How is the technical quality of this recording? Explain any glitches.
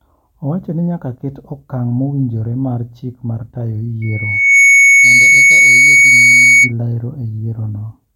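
The recording has one clear fault: loudspeaker feedback squeal from 4.02 to 6.73 s, just after "mar chik mar tayo". The microphone picked up its own loudspeaker, and the loop gain passed unity near 2.2 kHz, so that tone grew on itself in about half a second into a piercing whistle roughly 10 dB above the speech.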